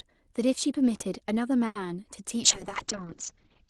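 Speech carried over a call, with two faults. From 1.66 to 1.76 s there is a short stall from a late packet: a packet arrived after it was due, the jitter buffer ran dry, and the receiver stretched the last sound for about 90 ms until it arrived. Nothing is lost, but one sound is held too long with a faint buzzy dip, and everything after it plays about 90 ms later. On a waveform this looks like a steady, repetitive stretch of even envelope. On a spectrogram it is a block of smeared, horizontally stretched harmonics rather than normal speech movement. From 2.43 s to the end there is a call bitrate drop. The sound turns rough and watery and loses its brightness, which fits the encoder's rate falling from about 40 kbps to about 10 kbps after the bandwidth estimate collapsed. On a spectrogram the upper energy edge steps down from 12 kHz to 8 kHz at that point, and the remaining detail looks coarser and more blotchy.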